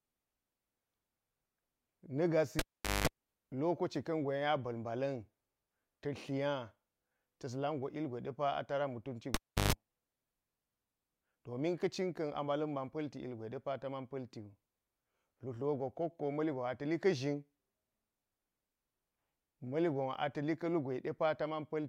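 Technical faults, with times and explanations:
2.59–3.07 s and 9.34–9.73 s (just after "a tara mutunci"), cable pulled and plugged in: each time there's a pop, the speech drops out for about 430 ms and then 330 ms, and a 50 Hz mains buzz lasting about 200 ms and then 130 ms comes in while only the plug tip is touching, before a second pop as the signal returns.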